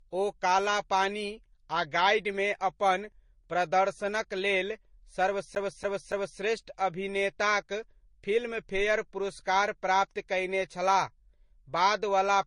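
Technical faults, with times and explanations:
Throughout: transcoding between lossy codecs. Two layers of compression smear are heard at once, with nothing above 10.6 kHz; likely an MP3 re-encoded to Vorbis at similarly low bitrates.
5.55 to 6.40 s: CD stuck on one turn. A 283 ms slice of speech repeats three times with brief mutes, as a scratch throws the laser back each rotation.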